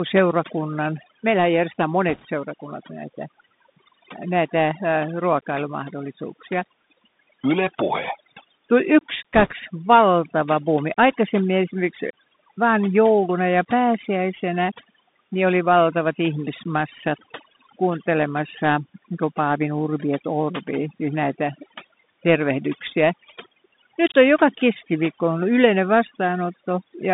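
Speech, narrowband throughout. A Bluetooth CVSD headset codec limits it to roughly 150 Hz to 3.7 kHz, fitting a 64 kbit/s link. Its adaptive step gives scratchy s sounds and granular hiss. Overdone noise removal leaves near-silent gaps with twinkling specks. Bit errors on a Bluetooth voice link add brief rushing crackle from 2.09 to 2.26 s. They return from 9.34 to 9.52 s, just before "valtava buumi". Error rates of a few percent suit this.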